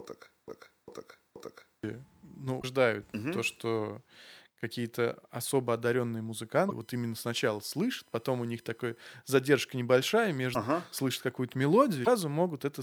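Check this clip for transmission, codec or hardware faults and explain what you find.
Three kinds of fault turn up in this speech clip: a broken-record loop, repeated bursts of damaged compressed data, and a stretch of USB whine.

From the very start to 1.84 s, a 478 ms fragment repeats back to back three times, with the real continuation lost. This broken-record loop is likely a stalled player or stream resending its last buffer.

Short chirps or blips occur at 0.46–0.50 s, 2.60–2.64 s (just before "угу то что"), 6.68–6.72 s (just after "особо одаренные"), 10.52–10.56 s (just after "задержка небольшая") and 12.03–12.08 s. These are damaged data in a compressed stream, where the decoder misreads frames and resyncs.

From 6.82 to 9.15 s, a faint fixed-pitch whine sits roughly 40 dB below the speech. Its 1 kHz series is strongest at 9 kHz, which is USB whine from the bus's 1 ms frame activity leaking in through power or ground.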